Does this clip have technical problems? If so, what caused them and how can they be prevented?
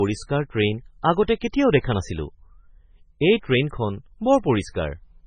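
Yes. Throughout the speech there is heavy damage that sounds like MP3 compression, likely from a very low bitrate, consistent with around 16 kbps. Short of bits, the encoder cut everything above 9.3 kHz and dropped weak frequency lines that flicker on and off between frames, giving a watery, swirly texture with chirpy s sounds and smeared onsets. A spectrogram shows a flat ceiling at 9.3 kHz and patchy, blinking holes below it. Encoding at a much higher bitrate, or using a lossless format, would prevent this.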